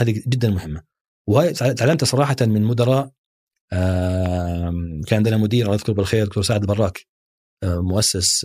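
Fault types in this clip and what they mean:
Loud pop: sharp pops at 1.93–1.95 s and 4.26–4.28 s, about 10 dB and 5 dB above the speech, likely from a voltage pulse such as a plug, switch or static. Each appears as a narrow waveform spike and a thin vertical broadband spectrogram stripe.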